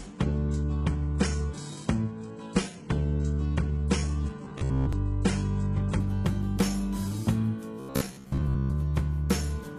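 From the start until 6.0 s the audio comes from an adaptive stream starting at a low bitrate. The top end sounds thin and synthetic, and codec artefacts are heavy, which fits a very low-rate HE-AAC stream. At 6.0 s the quality jumps suddenly, consistent with a switch to a much higher AAC-LC rate, with no gap or dropout.

Two stretches of robotic sound occur, at 4.45 to 4.93 s and at 7.80 to 8.76 s. Each turns the sound into a rigid metallic buzz locked at 66.8 Hz that still loosely follows the original contour. The cause is likely repeated short buffers. Audio arrived too late, so playback looped the last fragment of about 15 ms while roughly half of the real material was skipped. That loop length sets the fixed buzz pitch.

These two faults are easy to tell apart. The bitrate fault dulls the treble for several seconds and ends with one sudden lift. The buffer repeats impose a steady pitch in brief bursts, whatever the bandwidth.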